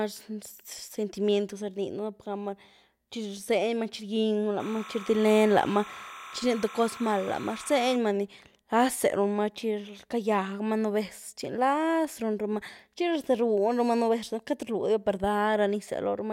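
From 4.6 to 7.96 s, before "ni nlazé runmaa", timecode bleed: leaked code chirps between 1 and 2 kHz, about 15 dB below speech.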